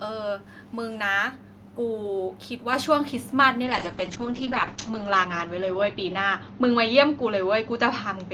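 At 2.73 s there's a microphone volume step-up: the software nudged the input gain about 5 dB at once, so voice and background jump louder together. From 3.64 s to the end, a call bitrate drop sets in. The top end gets cut at 8 kHz and the speech turns rough and muffled, which points to a heavy drop toward 8 kbps, bottoming out for about 1.08 s.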